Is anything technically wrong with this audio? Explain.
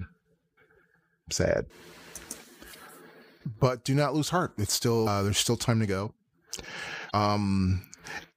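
Yes. Damaged data in a compressed stream causes four brief bursts in this speech, at 0.54–0.58, 2.71–2.75, 5.03–5.08 (just before "there's still time to") and 7.07–7.12 s. Each lasts about 40 ms. Corrupted bytes make the decoder misread frames and hunt for sync, producing a short chirp, squawk, click or hole.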